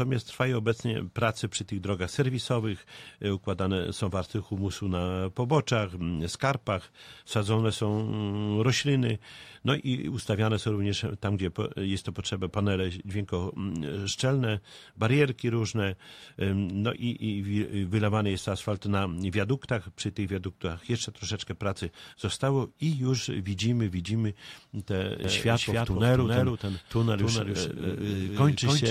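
From 25.24 s to the end, a full-band copy of the sound trails the original by about 300 ms at roughly 5 dB quieter. It starts abruptly, with no decay or room colour. This doubled audio track likely comes from a second, slower capture path.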